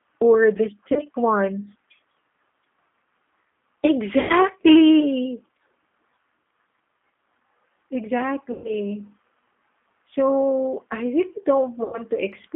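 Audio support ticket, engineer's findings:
G.729 codec, whole clip. Speech band-limited to roughly 250 Hz to 3.5 kHz, with nothing above. Texture rough, slightly synthetic, with plainly audible coding damage. Consistent with G.729A at 8 kbit/s, a model-based coder that rebuilds each 10 ms frame from a filter, a pitch predictor and a few pulses. Differs from a plain narrowband line: that would be dull but clean, whereas this one has the rough, synthetic texture of a parametric coder.

VoIP packet loss concealed by the speech codec, at 0.93–1.03 s (just after "or the"), 4.20–4.33 s, 8.52–8.74 s and 11.84–12.02 s. About 30 ms lost at the first point, then 90, 120 and 90 ms, which fits single to four-packet gaps. The decoder extends the last pitch and filter into a buzzy tone or coloured noise that fades. Differs from a hard dropout: the gap is filled rather than cut, and the speech recovers weakly just after each gap because the coder rebuilds its state frame by frame.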